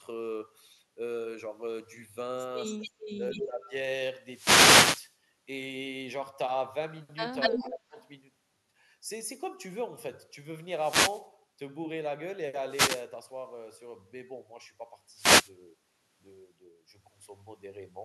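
At 2.64 to 2.91 s a faint delayed copy of the speech is heard, about 20 dB below the voice and trailing by 263 ms. This is an echo leak. The likely cause is a far end on loudspeaker whose echo canceller let part of the returning sound through. From 3.16 to 3.72 s the speech dips by up to about 15 dB in pieces, roughly 400 ms in all. This is speech suppressed in double talk. Both sides likely spoke at once, and the canceller turned the local talker down with the echo. Inside that stretch, at 3.3 to 3.46 s, a stronger echo leak appears, about 10 dB down and 240 ms late, likely from the same canceller. From 4.24 to 5.18 s a burst of static swishes over the sound. This is a wireless microphone noise hit. The FM radio link faded, and receiver noise rose over the signal. At 7.4 to 7.79 s the echo leak is loudest, only about 5 dB below the speech and 240 ms behind it, likely from the canceller again. 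Over 7.5 to 7.97 s speech is again suppressed in double talk, likely as both sides overlapped. It drops by up to about 20 dB for roughly 200 ms in total. A very faint echo leak follows at 8.01 to 8.07 s, about 40 dB down with the same 240 ms delay, likely the same cause. Further wireless microphone noise hits, heard as short swishes of static, come at 10.69 to 11.30 s, 12.66 to 13.09 s and 15.13 to 15.53 s.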